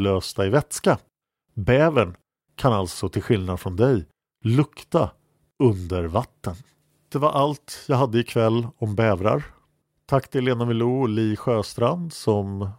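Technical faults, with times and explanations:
No technical faults can be heard in the recording; the speech signal stays continuous and stable throughout.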